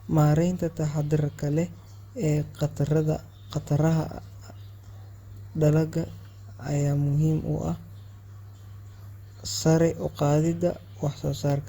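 Speech, with generation loss throughout. The sound is swirly and hollow, with a smeared, watery quality. Consonant onsets blur and lose their edge. The damage is heavier than a single moderate-rate encode would leave, though content reaches up to about 20.3 kHz. The likely cause is repeated lossy coding, about five passes through a codec such as Opus at around 64 kbit/s. Each pass quantises afresh on a shifted frame grid, so noise piles up.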